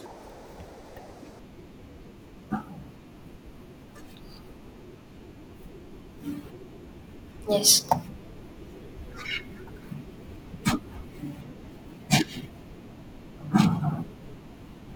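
From 0 to 1.39 s the speech is audio read two samples at a time (double speed): pairs of samples are taken as one frame, so it runs twice as fast and 12 semitones higher. On a spectrogram, harmonics sit an octave up, spaced twice as wide, with high content folded back.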